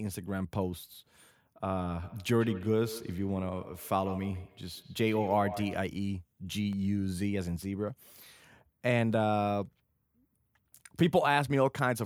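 Speech carries two distinct faults. From 2.02 to 5.91 s there is feedback echo between two devices. A second device in the room replays what the first device's microphone sent, and that microphone catches it again, so the sound returns roughly every 150 ms, up to about 14 dB below the speech. On a spectrogram it shows as faint, evenly spaced copies of each syllable trailing behind. Between 6.44 and 6.87 s come CD scratch ticks: four brief clicks, each well under a millisecond, where a disc blemish defeated error correction on successive rotations. The waveform shows them as isolated tiny gaps, and the spectrogram as thin vertical broadband lines.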